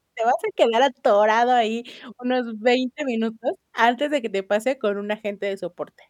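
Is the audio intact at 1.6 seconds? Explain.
Yes, at 1.6 seconds the speech plays through intact, with no dropout, click, distortion or other fault at that moment.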